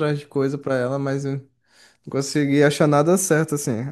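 No audible technical faults.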